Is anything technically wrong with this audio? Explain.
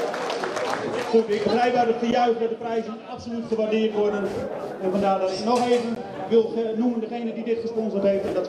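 Yes. At 2.11 s and 5.95 s the audio drops to blocks of digital silence, about 10.7 ms and 14.4 ms long. The output buffer likely wasn't filled in time, so zeros replaced the sound. The first gap fits a 512-sample buffer, and each gap is short enough to be heard as a tick or dip rather than as silence.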